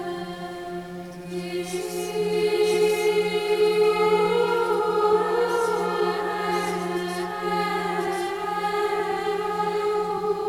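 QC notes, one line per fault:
throughout, doubled audio track: an equally loud full-band copy trails about one second behind, likely from a second, slower capture path. The spectrogram shows every event repeated one second later, with no decay smear.
throughout, clock drift between sender and receiver: the sender clock runs roughly 5% fast, so the receiver's buffer keeps overfilling and audio must be discarded. The waveform shows small, irregularly spaced splices.
0.11–10.48 s, repeated timing corrections: short pieces are cut out at uneven intervals, pushing playback to 103% speed. They are seen as tiny waveform discontinuities and narrow vertical seams on the spectrogram.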